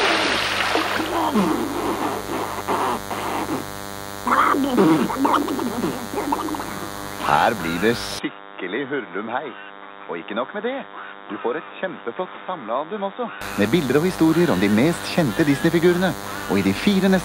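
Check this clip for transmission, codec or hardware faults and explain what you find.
Two hardware faults are present: a buzz that runs the whole way through, and a stretch where the input sounds like it has changed to a worse device.

DECT cordless phone buzz, throughout: a nearby DECT handset or base transmits a short radio burst every 10 ms, and the audio circuitry rectifies it into a 100 Hz buzz rich in harmonics, roughly 15 dB below the sound. Mains hum sits at 50 or 60 Hz and sounds smooth; this is thinner and harsher.

Input switched to a poorer device, 8.19 to 13.41 s: the sound abruptly turns dull and boxy, with nothing above 3.8 kHz, drops about 10 dB in level, and carries a faint new noise floor, with no gap at either switch. The likely cause is the system changing to another microphone or a headset call profile. Unlike a codec bandwidth drop, the level and noise change along with the tone.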